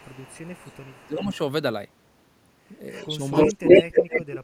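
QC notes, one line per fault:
0.0–1.38 s, 2.9–3.07 s, 3.32–4.24 s: echo leak. A delayed copy of the speech trails behind it, 369 ms late in the first stretch and 293 ms late after that. It's faint at first, about 25 dB then about 20 dB under the speech, but by 3.32 s it's louder than the speech itself. The likely cause is a far-end echo canceller missing loudspeaker pickup.
1.05–1.41 s, 3.5–4.43 s: speech suppressed in double talk. The talker dips while the echo overlaps, by around 15 dB over roughly 0.3 s, then by around 25 dB across roughly 0.7 s. The canceller likely couldn't separate talker from echo and pulled both down.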